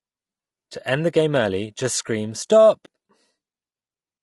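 From start to finish the speech sounds rough and grainy, with a hiss filling the gaps between the voice's harmonics and a top band that sounds thin and somewhat synthetic. The damage is plainly audible. This is likely low-delay AAC compression of the AAC-ELD kind used for video calls. The coarseness fits a bitrate of around 32 kbps.

Right after "early just scream 'stop'", from 2.85 to 2.88 s, the sound briefly fades out and back in. It leaves a brief dip. This is AAC frame loss with muting. The decoder received nothing for that stretch and zeroed its spectrum, and the overlapping windows smoothed the gap's edges. The length of the gap points to a single lost frame of about 20 ms.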